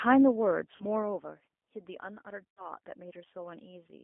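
It's a speech clip that's been through the G.729 codec the whole way, at 8 kbit/s. That explains the slightly rough, synthetic edge, since the decoder rebuilds the voice from a vocal-tract filter, a pitch predictor and a few pulses per frame. Nothing sits outside a band of roughly 250 Hz to 3.5 kHz. There are also two spots of VoIP packet loss concealed by the speech codec. At 0.76 to 0.86 s, about 40 ms went missing, which fits two lost packets. At 2.54 to 2.67 s, about 60 ms went missing, which fits three. In both the decoder stretches its last pitch and filter into a sound that fades, and the voice stays weak for a moment after real packets resume.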